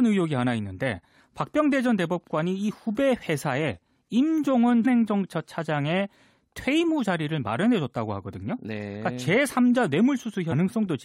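Damaged data in the compressed stream makes the decoder misread frames and lose sync in this speech clip, searching for the next valid frame header. Each break is a brief chirp or blip, at 4.84 s and again from 10.51 to 10.53 s.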